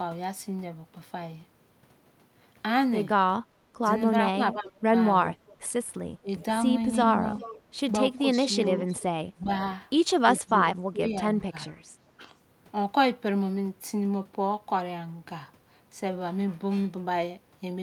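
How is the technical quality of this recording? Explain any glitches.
The recording has two recurring faults typical of a hands-free call: the talker is repeatedly turned down, and a faint delayed echo of the speech leaks back.

Speech suppressed in double talk, from 3.82 to 6.28 s, 8.38 to 9.49 s and 10.4 to 12.2 s: the likely cause is an echo canceller that, with both ends talking, could not tell near speech from loudspeaker echo and attenuated everything. The voice dips in short pieces, up to about 25 dB, totalling roughly half a second in the first and last stretches and about 0.3 s in the middle one.

Echo leak, from 5.48 to 6.45 s and 7.37 to 10.54 s: the far end's echo canceller likely failed to remove all the loudspeaker sound its microphone picked up, so it returned. A copy of the speech trails about 0.4 s behind, about 30 dB down at first and about 20 dB down later.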